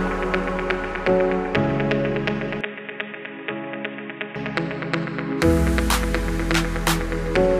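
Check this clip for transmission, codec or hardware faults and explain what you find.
One fault: from 2.61 to 4.36 s the sound goes dull and boxy, cut off above 3.8 kHz, about 10 dB quieter, with faint new background noise. This is likely an input switched to a poorer device.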